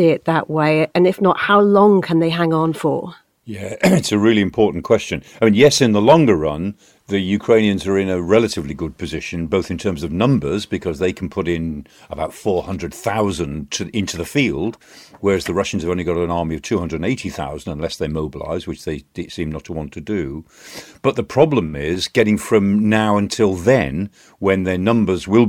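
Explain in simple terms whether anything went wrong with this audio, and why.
Nothing went wrong here: the speech comes through steady and unbroken all the way, with nothing to point at.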